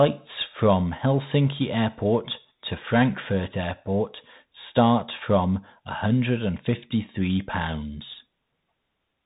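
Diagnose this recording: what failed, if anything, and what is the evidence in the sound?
Bluetooth CVSD headset codec, throughout the speech. This is a codec-stage fault. The band stops sharply near 3.8 kHz, and the damage is plainly audible: a granular hiss sits under the speech, s sounds are scratchy, and loud high-frequency passages distort. That pattern fits one-bit delta modulation at 64 kbps. Each sample only steps the signal up or down, so steep waveforms outrun the adaptive step size, and fine detail turns to quantisation grain.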